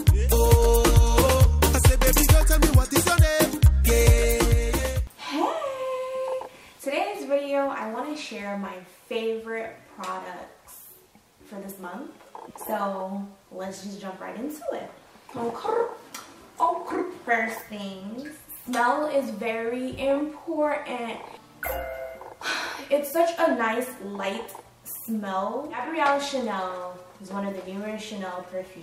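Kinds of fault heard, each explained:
No faults can be heard.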